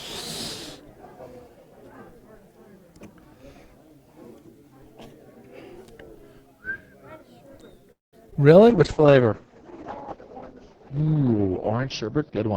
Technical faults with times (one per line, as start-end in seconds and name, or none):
7.91-8.15 call audio freeze
8.25-8.37 repeated packet loss (robotic sound)
8.63-9.19 jitter buffer slow-down
8.71-12.57 call bitrate drop
12.29-12.53 jitter buffer speed-up